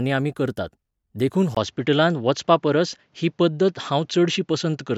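At 1.55 s, just after "करतात देखून", the speech turns duller, with nothing above 7.6 kHz, a 20 ms gap at the change, a new faint noise floor and no noticeable level shift. This points to the input likely being switched to a poorer device, which holds until the end.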